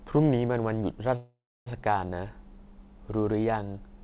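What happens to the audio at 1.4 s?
At 1.4 s the speech stops in a call audio freeze lasting from 1.16 to 1.68 s. The last sound stretches into a fading buzz or hiss, then about 0.27 s of silence. Delayed packets likely emptied the jitter buffer. Speech resumes where it stopped, about half a second late.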